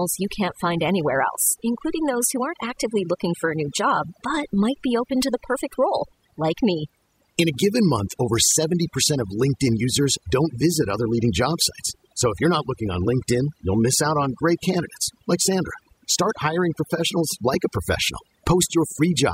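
A speech recording with overdone noise removal across its whole length. The noise reduction was set too hard. It pulls individual frequency bands down whenever they sit close to its noise estimate. Quiet parts of the voice fall into that range and get stripped away too. The background in the pauses drops and breaks up into twinkling, warbling specks.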